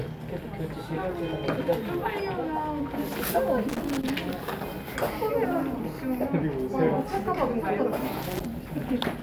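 Loose connector crackle appears from 3.69 to 4.10 s and again from 8.22 to 8.46 s: a worn or dirty contact intermittently losing and regaining connection chops the sound into irregular bursts of scratchy crackle.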